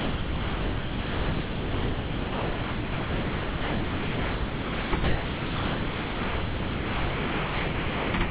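From 0.00 to 4.93 s, 5.04 to 8.13 s and 8.25 s to the end, the sound gives way to steady, featureless noise, with only brief returns near 5 s and 8.2 s. This is most likely sound dropped by the voice detector: the sender classed the sound as background, stopped transmitting, and the receiver filled the gaps with comfort noise. The returning fragments are band-limited to 4 kHz, which fits a G.711 call path.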